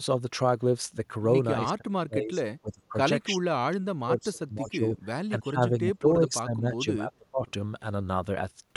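An echo canceller likely struggling with both sides talking at once turned this speech down, causing speech suppressed in double talk at 1.64–2.41 s, 2.61–2.98 s and 3.3–4.98 s. The level dips by up to about 35 dB, fading and cutting out in pieces. From 4.66 to 4.70 s, a likely echo leak from a loudspeaker sends back a brief, faint copy of the speech 316 ms late, about 30 dB below it. The same suppression returns from 5.29 to 7.47 s, with drops of about 25 dB at worst.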